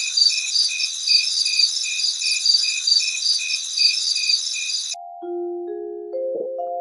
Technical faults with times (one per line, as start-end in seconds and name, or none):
0.00-6.81 noise suppressor applied to music or sounds
0.47-0.55 lost LE Audio frames
0.87-1.07 sound cut by the noise suppressor
3.57-3.77 sound cut by the noise suppressor
4.77-4.95 sound cut by the noise suppressor
6.35-6.46 lost LE Audio frames